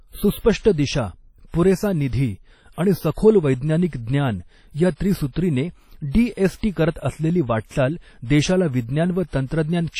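The clip is speech with WMA compression damage running through all of it. The sound rings and smears around each syllable. A washy hiss rises and falls with the signal. Quantisation noise from long transform blocks spreads over tens of milliseconds, and weak spectral detail has been zeroed out. Nothing remains above 17.7 kHz. The damage is heavy, which points to a low bitrate around 32 kbps. The likely cause is a simple WMA encoder.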